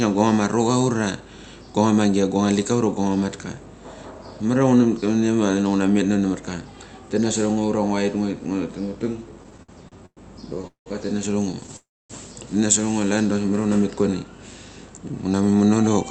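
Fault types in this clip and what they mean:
Repeated stalls (stutter): The receiver kept running out of buffered audio and stretched the last sound to bridge each wait. Between 9.43 and 10.19 s there are six such gaps, the longest 110 ms, filling about 31% of that stretch. A second burst at 11.52 to 11.74 s has five tiny gaps of 12 ms or less. Nothing is lost, but the speech drags. On a spectrogram, repeated smeared frames break the syllables, and the waveform shows repeated, slightly decaying cycles.
Call audio freeze: This sounds like packets being held up long enough to empty the jitter buffer. The last sound is carried on briefly as a fading buzz, then falls silent until the stream resumes where it stopped. This happens at 10.67 s, adding 188 ms with 120 ms of silence, and at 11.76 s, adding 331 ms with 260 ms silent. The spectrogram shows a short smear decaying into a blank column. 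The waveform flattens to near zero, then restarts abruptly.
Jitter buffer speed-up: From 14.89 to 16.05 s the receiver trims excess buffered audio by cutting out short pitch-period pieces many times in a row, roughly a fifth of a second in total. The speech runs at about 114% speed and sounds hurried, yet its pitch stays the same. On a spectrogram, harmonic spacing is unchanged while syllables and pauses appear compressed in time. In the waveform, small discontinuities mark where cycles were removed.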